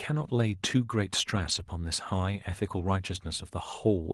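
From 1.35 to 1.61 s and 2.81 to 2.87 s, lost packets were rebuilt from error correction: low-bitrate copies fill the holes, leaving rougher, noisier patches without gaps or smeared, repeated sound.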